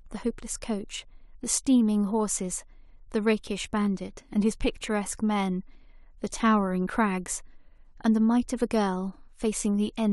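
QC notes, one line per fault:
No technical faults are audible anywhere in the speech recording, and the signal shows nothing that calls for attention.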